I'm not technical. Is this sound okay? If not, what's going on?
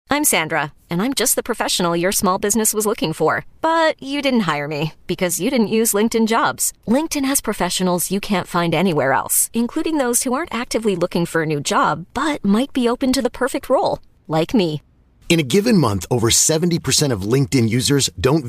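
No. At 2.12 to 2.14 s, between "just the professional your" and "business was looking for", the speech has chunks out of order: one 10 ms piece arrived one chunk late and played after the piece that should follow it. Nothing is missing, but you hear a brief jumbled moment.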